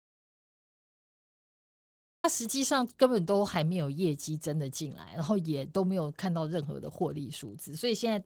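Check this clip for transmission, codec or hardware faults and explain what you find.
Three faults are present in this speech clip: low-rate Opus compression throughout, a dropout to silence at the start, and a short stretch of GSM interference near the end.

Opus voice compression affects the whole recording, at 16 kbps in hybrid mode with 20 ms frames and fullband output. In hybrid mode a SILK linear-prediction layer carries the band up to 8 kHz and a thin CELT layer covers the top. At this rate the excitation is coarsely quantised, so the speech sounds hoarse, muffled and slightly robotic. On a spectrogram, harmonics look smeared below 8 kHz and the region above it is sparse and patchy.

An audio dropout to silence is already in progress when the clip begins and lasts until 2.24 s. The input was likely lost, perhaps through a disconnected device or a mute, while the recorder kept writing silence. 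The opening is therefore dead silent, with no room tone, and the speech starts abruptly when the signal returns. The waveform shows a flat line over those 2.24 s, and the spectrogram is completely blank there, not faintly noisy.

GSM signalling bursts appear from 6.63 s to 7.49 s. A nearby 2G phone was exchanging signalling with its network, and the audio circuitry rectified its radio bursts, which arrive at about 217 Hz. The result is a faint galloping ticking and buzzing, about 30 dB below the speech. On a spectrogram it shows as a comb of lines spaced 217 Hz apart, and the waveform carries small regularly spaced spikes in short grouped clusters.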